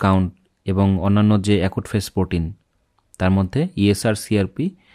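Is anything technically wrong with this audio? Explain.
No, nothing technically wrong jumps out here, so there's nothing to flag in this audio.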